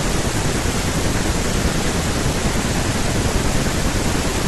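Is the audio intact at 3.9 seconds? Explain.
Yes, at 3.9 seconds the speech plays through intact, with no audible fault at that moment.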